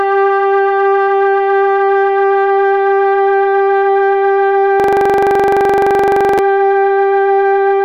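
At 4.80 s a system hang loop takes over until 6.39 s: a 42.67 ms chunk, consistent with a 2048-sample buffer, repeats at 23.4 Hz, giving a machine-gun stutter.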